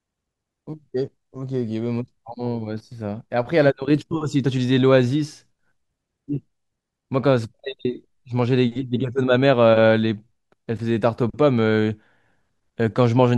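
Nothing in the speech recording stood out as a technical problem on listening.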